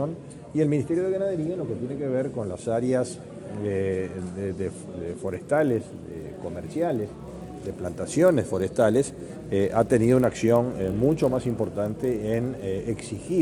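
From 5.26 s to the end, a resampler restarted on every block, 24 kHz to 48 kHz in 20 ms blocks, leaves edge errors: a 50 Hz buzz present only with signal, unlike steady hum.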